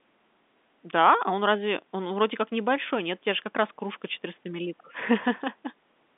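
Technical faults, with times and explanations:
No technical faults heard.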